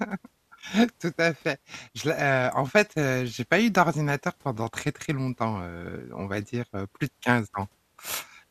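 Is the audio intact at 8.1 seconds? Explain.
Yes, the audio is intact at 8.1 seconds, with no dropout, click, distortion or other fault at that moment.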